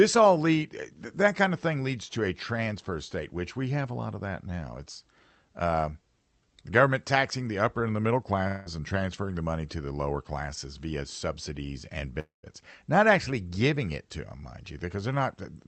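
At 8.47 to 8.69 s the speech gives way to a smeared, buzzy continuation of the last sound, about 0.18 s long, before normal audio returns with that stretch gone. At 12.20 to 12.46 s the same buzz appears and fades, and about 0.14 s of outright silence follows before the audio resumes, again skipping ahead. Both point to a likely long network dropout: packets stopped arriving, and the receiver's concealment extended the last sound instead of playing the lost audio.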